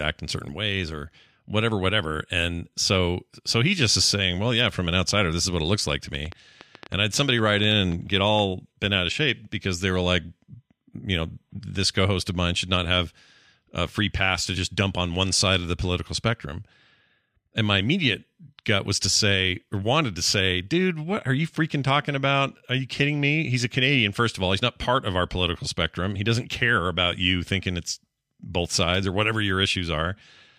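From 6.15 s to 8.40 s a train of clicks runs over the speech at about 7 per second, unevenly spaced, around fifteen similar pops peaking a few dB above the signal, audible in pauses too, likely from electrical interference or a faulty connection or power supply.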